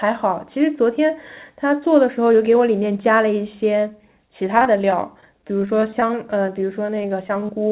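From 4.58 s to 7.50 s, the speech breaks up with repeated packet loss, heard as a robotic sound. Dozens of short holes, none longer than about 16 ms, are each patched by stretching the preceding sound, so roughly a tenth of that stretch is filler. Unlike a single dropout or steady codec grit, the damage comes as a rapid, ongoing stutter, layered over the call path's narrowband tone with nothing above 4 kHz.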